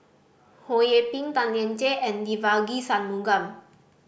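No audible technical faults.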